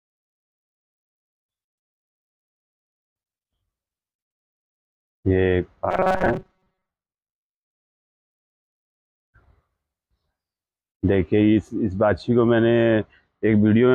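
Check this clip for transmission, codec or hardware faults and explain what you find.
One fault appears: robotic sound from repeated short buffers, from 5.91 to 6.90 s. A fixed 188 Hz metallic buzz is imposed on the audio, likely from late data being covered by looping a roughly 5.3 ms fragment, with most of the real audio in that stretch skipped.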